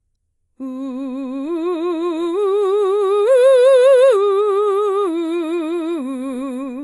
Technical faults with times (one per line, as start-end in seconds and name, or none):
0.00-6.83 AAC compression